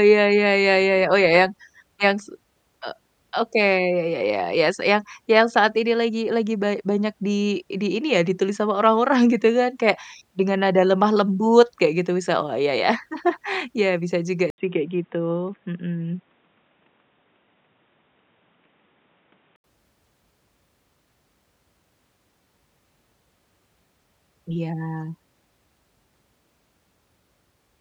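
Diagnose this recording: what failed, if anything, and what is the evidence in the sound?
Input likely switched to a poorer device, a driver-level change. At 14.5 s an 80 ms gap precedes a band cut off above 3.8 kHz, dulling the speech until 19.64 s. A faint new noise floor appears, well below the signal, with level unchanged.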